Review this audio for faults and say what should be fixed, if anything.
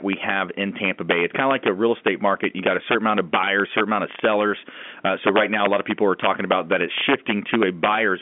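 Integer overflow runs throughout the speech. The loudest peaks are driven about 5 dB past full scale, and instead of being held at the limit they wrap to the opposite sign, leaving a small fraction of samples as sharp, violent cracks on peaks, heard through the narrow telephone band. To prevent it, add saturating arithmetic or a limiter before the integer conversion, and reduce gain so the peaks stay below full scale.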